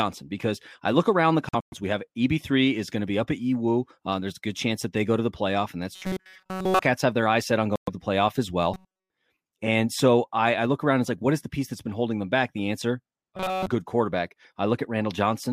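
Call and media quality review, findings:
Bluetooth dropout, 1.49–1.74 s, after "I look around the". Broken silences, about 162 ms lost across 232 ms, longest gap 116 ms. Likely packets missing the headphone deadline. Audio resumes further on, with the missing stretch skipped rather than delayed.

Bluetooth dropout, 7.76–7.89 s. About 116 ms lost. Likely late packets dropped at the headset link. Playback picks up where the sound would have reached, with no catch-up.

Robotic sound from repeated short buffers, 5.96–6.82 s, between "the playoff and that's" and "have their eyes set". Metallic 188 Hz buzz throughout. Likely starved playback looping one short buffer of about 5.3 ms.

Robotic sound from repeated short buffers, 8.74–9.10 s. Same 188 Hz buzz, the whole span made of repeats. Likely the same buffer underrun, with the last few milliseconds replayed while real audio is dropped.

Robotic sound from repeated short buffers, 13.37–13.67 s, just before "good quarterback". 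Rigid 188 Hz buzz, entirely repeated material. Likely the same short-buffer looping at the output.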